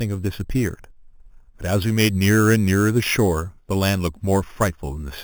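A speech clip with a bright, metallic fizz over the whole of it, swelling and fading with the voice and sitting at about 16 dB below it. This is imaging from sample-and-hold upsampling. The first mirror image fills roughly 4 kHz to 8 kHz, which points to audio at 8 kHz raised to 44.1 kHz by holding each sample with no smoothing filter, so folded copies of the speech spectrum land above the original band.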